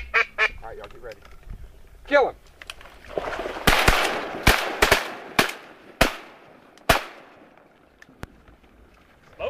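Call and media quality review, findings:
Loud pop, 8.23–8.26 s: single sharp thump, roughly 10 dB above the surrounding audio, with the sound carrying on beneath it. Likely a voltage spike (plug, switch, static discharge or driver glitch) entering the chain and shaped into a short pulse.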